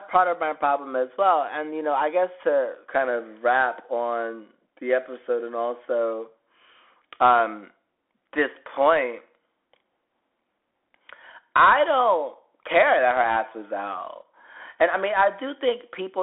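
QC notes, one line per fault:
Throughout: Bluetooth CVSD headset codec, band stops near 3.8 kHz, so the speech sounds boxed-in, with scratchy s sounds and granular hiss from one-bit step tracking.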